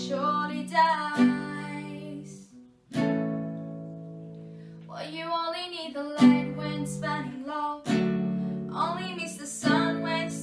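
No technical fault can be heard anywhere in the signal.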